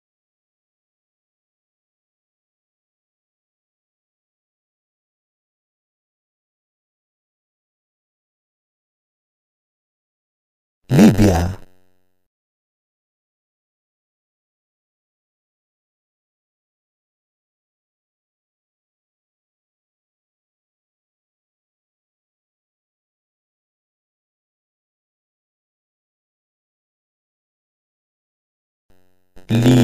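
Throughout, a block size mismatch (padded) leaves short zero-filled gaps about every 10.9 ms, giving a steady 91.9 Hz buzz. Playback runs at 0.919 speed with unchanged timbre. The waveform shows regular dropouts; the spectrogram shows evenly spaced vertical striations.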